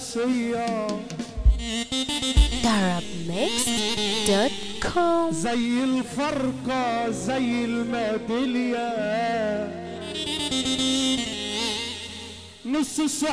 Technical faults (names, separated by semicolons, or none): none